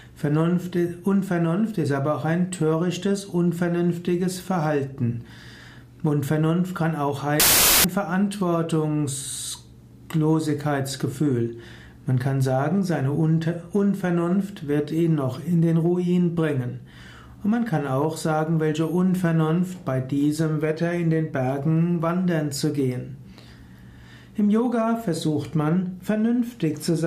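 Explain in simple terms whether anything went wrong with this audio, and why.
Between 7.40 and 7.84 seconds the sound turns into a burst of harsh hiss. That's samples built from the wrong bytes: the player stitched each sample together from mismatched pieces, so the jittery fine detail got blown up into loud noise.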